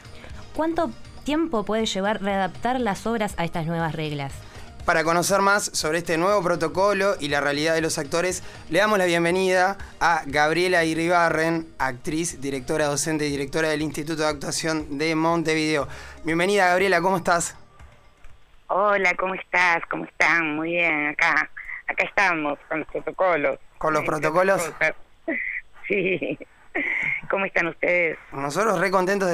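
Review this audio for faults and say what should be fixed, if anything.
Nothing needs to be fixed, as the review turned up no faults in this audio.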